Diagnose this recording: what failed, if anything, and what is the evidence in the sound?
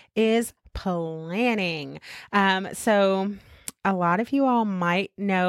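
Nothing failed: the recording carries no audible evidence of any fault.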